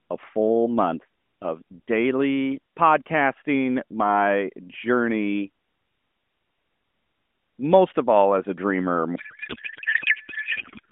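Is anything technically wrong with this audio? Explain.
Yes. From 9.16 s to the end, right after "all as a dreamer", there is a codec payload misread. The narrowband AMR speech is replaced by garbled noise and warble that barely tracks it. This points to octet-aligned AMR frames being unpacked as bandwidth-efficient ones, so the decoder reads parameters from the wrong bit positions.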